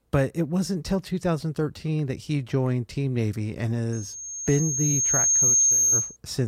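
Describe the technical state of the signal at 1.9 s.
At 1.9 s the speech signal is intact, with no audible technical fault at that moment.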